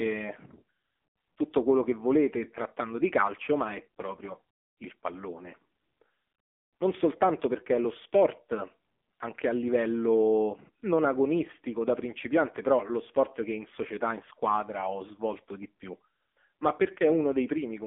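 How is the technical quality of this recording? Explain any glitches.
The recording is degraded throughout by AMR narrowband mobile codec processing. Its heavy, buzzy synthetic quality fits a low 6.7 kbps mode. The sound is confined to roughly 250 Hz to 3.5 kHz, with nothing above 3.6 kHz. Unlike a simple telephone band filter, the vocal-tract model leaves the speech buzzy and artificial.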